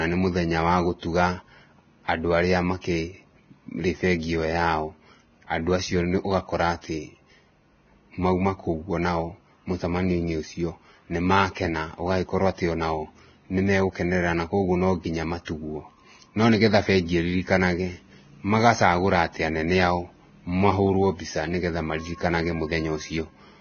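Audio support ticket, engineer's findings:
Hiss and graininess across the whole speech clip, with nothing above 6.5 kHz, roughened tones and blurred consonant attacks. Likely Vorbis compression at heavy damage, which points to a very low bitrate near 19 kbps.

Unlike a plain low-pass, the band below the cut-off is not clean. The codec has replaced fine treble detail with noise of similar energy, so the damage is grainy texture rather than simple dullness.

Pre-echo, brief hiss ahead of sharp onsets at 2.05 to 2.08 s (39 ms) and 2.81 to 2.84 s (31 ms). Block-spread quantisation noise fills the quiet gap before each attack.

Pre-echo again at 15.45 to 15.47 s (25 ms), after "nĩmagũkenerera na koguo nonginya". The noise arrives before the onset, not after it as reverb or ringing would.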